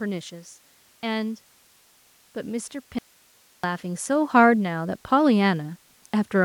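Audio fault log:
2.33–5.81 s, automatic gain rising: the speech and the background noise floor swell together by about 9 dB over roughly three and a half seconds as the gain control lifts a too-quiet input. On the waveform the envelope widens steadily, and the spectrogram brightens evenly across all bands.
2.99–3.64 s, audio dropout to a faint residue: the speech cuts off abruptly for 0.65 s, leaving only hiss some 35 dB below the signal before snapping back. The cause is likely a lost input while the downstream path stayed live. The waveform shows a near-flat band, and the spectrogram a pale, uniform noise wash with hard vertical edges.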